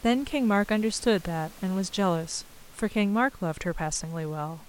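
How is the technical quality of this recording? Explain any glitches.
No glitches detected; the only thing beneath the speech is room noise sitting about 25 dB down, which belongs to the recording environment rather than the system.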